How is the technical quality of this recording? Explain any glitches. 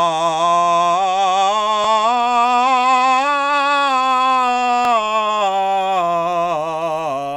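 The music is marred by two brief glitches from overlapping chunks, at 1.84 s and 4.85 s. Each chunk starts about 7 ms early, replaying that sliver at the join as a tiny stutter-click. The exact 3.0 s spacing and the repetition, rather than a gap, distinguish it from a dropout.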